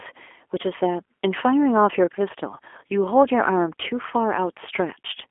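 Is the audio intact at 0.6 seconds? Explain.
No. At 0.6 s the speech is already carrying G.729 codec damage, which runs through the whole clip. The codec rebuilds the speech from a vocal tract filter, a pitch predictor and a few pulses per short frame, so the sound comes out plainly rough and faintly synthetic, which fits an 8 kbit/s coder. Nothing reaches above about 3.6 kHz. Simple telephone band-limiting to roughly 300 Hz to 3.4 kHz would sound muffled but still natural, without this buzzy, rebuilt texture.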